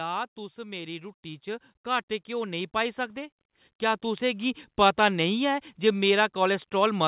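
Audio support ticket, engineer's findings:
Automatic gain rising, 0.35 to 4.70 s. AGC judged input too quiet, ramped gain up about 14 dB over roughly 4.4 s. Speech and background noise swell together, no sudden step. Slow ramp points to the call's gain stage. Band stops at 4 kHz, which fits narrowband G.711 mu-law telephony.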